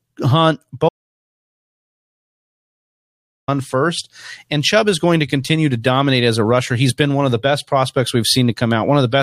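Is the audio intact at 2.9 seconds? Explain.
No. From 0.89 to 3.48 s the speech cuts to silence with no room tone, an audio dropout to silence, likely from a lost input.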